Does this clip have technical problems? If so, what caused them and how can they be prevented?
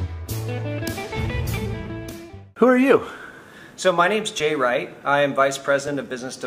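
Yes. There are small forward jumps in the sound at 2.11 s, 4.4 s and 5.88 s, each with no gap of silence. These are likely a dropped buffer (overrun): the capture program fell behind, the hardware overwrote unread samples, and the audio either side was joined directly, losing around 20 ms at the first point and around 10 ms at the other two. Larger capture buffers, a higher-priority audio thread and less competing CPU load prevent it.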